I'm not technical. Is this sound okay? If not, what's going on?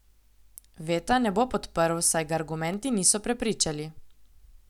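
No. At 2.74 s, just after "bo podprl saj ga", there is a tiny tick. It is a block of digital silence: the sound drops to nothing for under a millisecond, which fits a 32-sample block, and snaps straight back. Those sudden edges make the click.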